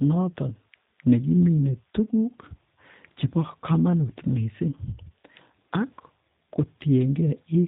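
Speech runs through G.729 codec damage from start to finish, and it is plainly audible. Nothing above 4 kHz survives, so the sound is dull and boxy. The voice has a rough, synthetic edge. That fits an 8 kbit/s G.729A stream. This codec does not store the waveform. It rebuilds each 10 ms frame from a vocal tract filter, a pitch predictor and a few coded pulses. The coarse rebuild causes the roughness.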